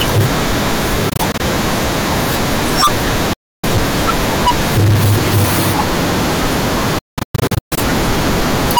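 The whole clip is hard clipped, driven roughly 38 dB too hot so around a tenth of the samples get flattened, leaving harsh fuzz on every loud syllable. Then there are gaps of silence, likely a Bluetooth dropout as packets missed the headphones: broken stutters from 1.09 to 1.40 s, a solid hole from 3.33 to 3.64 s, and choppy losses from 6.98 to 7.78 s.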